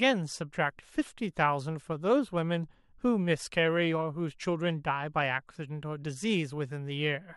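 No technical faults can be heard at any point in the recording.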